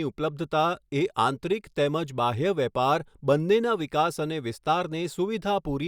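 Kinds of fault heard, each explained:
No faults detected in this speech recording.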